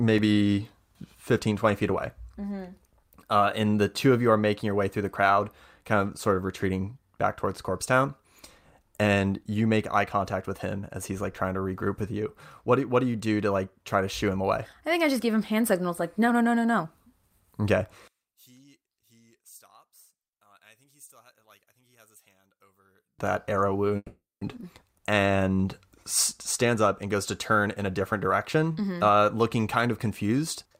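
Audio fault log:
18.08–23.19 s, one channel inverted: the speech drops by about 32 dB to a faint remnant rather than true silence. The likely cause is one stereo channel with reversed polarity, so the shared centre content cancels when summed to mono, leaving only the small inter-channel difference.
23.96–24.42 s, call audio freeze: the last sound smears into a fading buzz or hiss, then about 240 ms of silence, before speech resumes exactly where it stopped. This is likely a starved jitter buffer. About 450 ms is inserted, nothing is lost, and the delay grows.
24.61 s, skip ahead: playback jumps forward with only a tiny splice and no audible pause, dropping around a third of a second of speech. Unlike the freeze just before it, audio is discarded rather than paused, so the two sides join almost directly.
26.65–28.71 s, jitter buffer speed-up: speech runs at 107% speed and sounds hurried, with roughly 150 ms trimmed as many short pitch-period cuts. 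The pitch stays unchanged, which distinguishes it from simple resampling, where speeding up would also raise the pitch.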